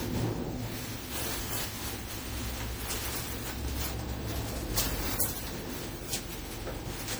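A recording of sounds that has likely been through repeated lossy encoding, around ten MP3 passes at what sounds like 96 kbit/s, giving generation loss throughout: each re-encode quantises on a shifted frame grid, so swirling noise and hollow spectral gaps accumulate and transients smear.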